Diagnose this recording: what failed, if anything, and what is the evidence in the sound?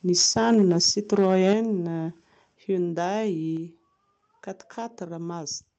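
The first problem is microphone overload at the converter stage. From 0.17 to 0.91 s the loudest syllables have a harsh, crackly edge, and it happens again from 1.18 to 1.53 s. The first burst is driven about 6 dB past full scale and the second about 2 dB. In each burst a few percent of the samples are flattened at the ceiling. The likely cause is a mic input set too hot, which squares off the peak tops before they're digitised.

The second problem is the microphone volume stepping down, which happens in the call processing. At 0.54 s the whole level, background included, drops abruptly by about 2 dB, right in the middle of the first distorted stretch. At 1.53 s it drops again by about 6 dB, just as the second clipped burst ends. These are two clean steps, not a smooth fade, so this is likely automatic gain control reacting to the clipping by cutting the device's input volume. The audio passes through an Opus call path with content up to 8 kHz.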